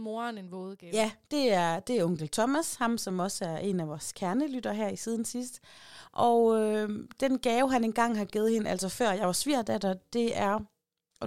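No technical faults can be heard anywhere in the recording; the signal stays continuous and stable throughout.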